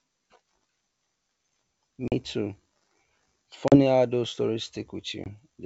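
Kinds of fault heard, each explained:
Packet loss on an ADPCM call: three abrupt, hard-edged silences cut into the speech. The first comes near 2.08 s, the second just before "how those stories" at 3.68 s, and the third right after it at 5.24 s, losing about 40, 40 and 20 ms. After each gap the speech returns slightly distorted. Lost packets are filled with silence, leaving the decoder's adaptive predictor and step size out of step until they settle.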